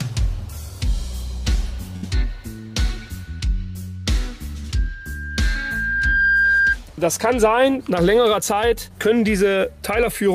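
The audio has two separate faults. At 1.96 to 2.04 s there is a burst of packet loss. Packets were lost or arrived too late, and the receiver filled a 62 ms gap by carrying the last sound forward while fading it down. The audio then picks up again with about 60 ms of material missing. A plain dropout would go silent, but here the held, decaying fill followed by a jump forward points to concealment of lost packets. From 4.75 to 6.77 s a loudspeaker feedback squeal appears as a single tone at 1.6 kHz. It rises over roughly one and a half seconds until it sits about 5 dB above the surrounding audio. A microphone was picking up the loudspeaker it fed, and the loop gain at that frequency went above one. A steady hum or interference tone would start at full level, but this one grows by itself, which marks it as feedback.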